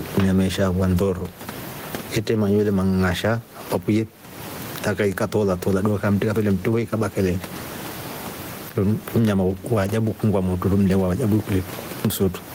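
Gain pumping runs through the whole clip, from start to finish. The likely cause is input gain set far too high for the microphone, with a fast limiter or compressor clamping down whenever the speech gets loud. The level swings by something like 20 dB, with the room noise sitting about 30 dB below the speech, leaving the speech flattened and squashed.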